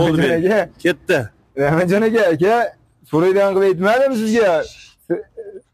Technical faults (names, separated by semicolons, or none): crude rate conversion